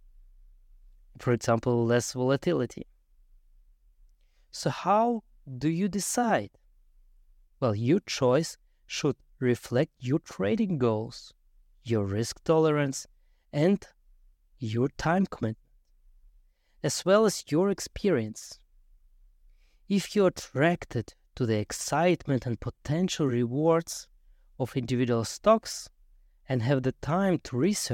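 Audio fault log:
Nothing to log here; the speech comes through without any technical faults I can hear.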